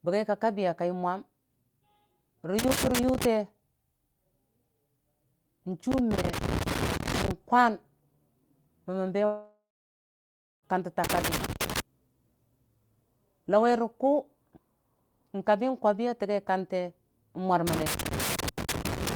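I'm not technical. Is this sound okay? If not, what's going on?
No, there are two problems.

First, loose connector crackle at 2.59 to 3.25 s, 5.92 to 7.31 s, 11.04 to 11.80 s and 17.67 s to the end. You hear bursts of scratchy crackle. A worn or dirty contact keeps losing and regaining touch, chopping the signal.

Second, a long network dropout from 9.25 to 10.65 s. The last sound drags on as a fading buzz, then about a second of silence. Roughly 1.4 s of speech is gone, likely because the audio never arrived over the connection.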